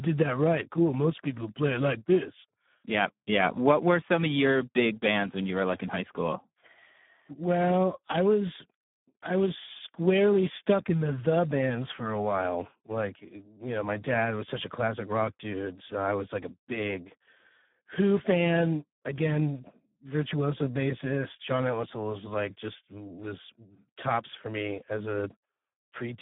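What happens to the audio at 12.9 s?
At 12.9 s you're hearing Speex codec damage, and it isn't a passing event: the same degradation runs through the whole clip. The speech sits in a narrow line band of roughly 150 Hz to 3.6 kHz, with nothing at all above 3.8 kHz. The coding is heavy. Too few bits go to the excitation, so the speech comes out hoarse, noisy and edging toward robotic, which fits a low setting around 8 kbps.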